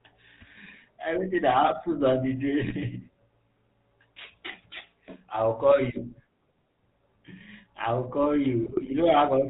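It's a speech clip that's gone through the old GSM full-rate codec the whole way, and you can hear it plainly. Everything above 4 kHz is gone, and the voice has that buzzy, gravelly grain you get when the codec models the vocal tract and drives it with a coarse train of regular pulses instead of the real excitation. That roughness fits the 13 kbps full-rate coder. On top of that there are two bursts of GSM bit errors, where corrupted bits reached the decoder and scrambled the filter, pitch and gain values for a run of frames. The first comes right after "that happens on the", from 2.6 to 2.73 s, a short squawk and pop lasting only a handful of 20 ms frames. The second follows "I'll call", from 8.63 to 8.91 s. It's longer, spanning 14 frames, with the spectrum bent and the level jumping. Both sound like a weak link with an error rate of a couple of percent.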